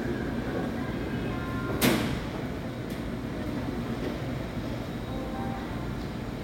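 No technical faults are audible.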